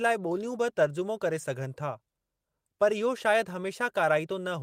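Clock drift between sender and receiver runs through the whole speech clip. The sender's clock runs about five percent fast. Audio arrives quicker than the receiver plays it out. The jitter buffer keeps filling, so the receiver must shed material.

Repeated timing corrections follow from 0.28 s to 4.57 s. The receiver trims short pieces to keep pace, playing the speech at 105 percent. The cuts come unevenly spaced. Each is small, heard if at all as faint hiccups and a slightly hurried, unsteady tempo.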